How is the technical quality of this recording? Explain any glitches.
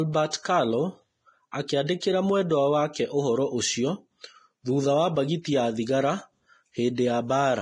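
The recording is heavily degraded by low-bitrate compression, and two attacks are smeared by pre-echo.

Vorbis compression runs throughout. Nothing sounds above 10.6 kHz. The treble is hissy and grainy, which fits a bitrate near 29 kbps. Coarse quantisation is the likely cause.

Pre-echo appears from 0.31 to 0.33 s and again at 1.68 s. A short hiss leads each attack by 22 ms and 15 ms. The codec spreads its noise across a whole block, so each onset sounds soft.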